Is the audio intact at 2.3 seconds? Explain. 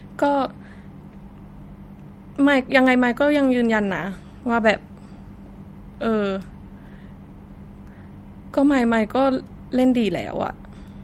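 Yes, at 2.3 seconds the speech plays through cleanly, with no dropout, click, distortion or other fault.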